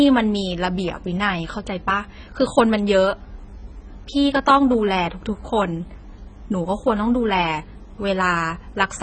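Speech runs for about 9 seconds with AAC compression damage throughout. Nothing reaches above 9 kHz, so the top end is missing and the sound is dull. The damage is heavy. Sibilants come out smeared and fizzy, and sustained sounds warble. That points to an encoder starved of bits, which then quantises the spectrum coarsely and leaves gaps in it. The likely cause is AAC-LC coding at a very low rate, which fits a bitrate around 16 kbps.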